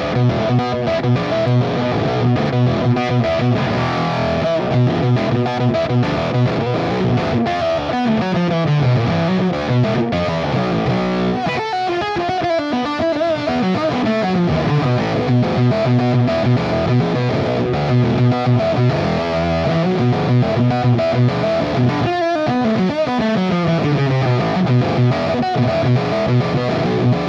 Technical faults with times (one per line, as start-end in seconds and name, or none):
none